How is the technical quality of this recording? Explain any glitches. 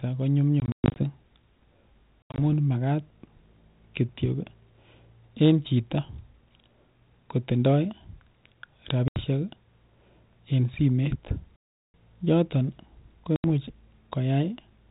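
Speech on a G.726 ADPCM phone link is broken by five bursts of dropout. Packet loss on an ADPCM call occurs at 0.6–1.03, 2.23–2.41, 9.08–9.21, 11.56–11.94 and 13.36–13.45 s. Lost packets become hard-edged silences, the longest about 0.38 s. Meanwhile the decoder's predictor and step size drift from the sender's, so speech resumes slightly distorted before settling.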